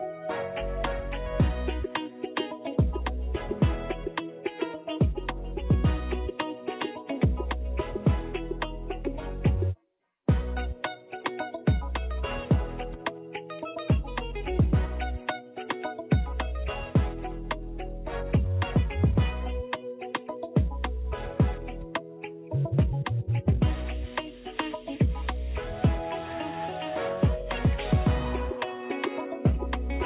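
Nothing here is actually wrong: the audio has come through a call path that sounds like ordinary G.711 mu-law telephony, with the band stopping at 4 kHz just as you'd expect from that kind of connection.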